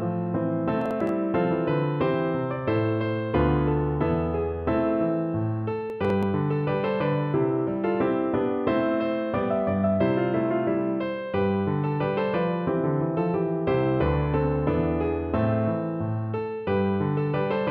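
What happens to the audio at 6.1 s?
At 6.1 s there is processor overload crackle, running from 5.9 to 6.23 s. The processor falls behind on very short buffers, well under a millisecond each. A handful are skipped outright, leaving hard-edged gaps. These stack into a brief gritty tearing over the sound.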